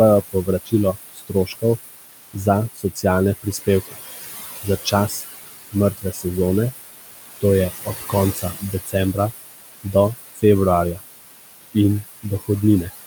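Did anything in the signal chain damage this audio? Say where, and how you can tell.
Yes, in the call processing stage. Noise suppressor artifacts run through the whole clip. The room noise, only about 9 dB under the speech, gets pushed down by about 17 dB between phrases and then swells back up under the talking. The suppressor works on the bands it takes for steady noise, frame by frame.

You also get speech cut by the noise suppressor at 0.32–1.64, 2.33–3.96, 4.63–6.25, 7.41–9.19, 9.83–10.43 and 11.74–12.49 s. Soft consonants and word endings dip by about 16 to 20 dB, up to half a second or so per stretch, and sound swallowed. The suppressor judged them to be noise.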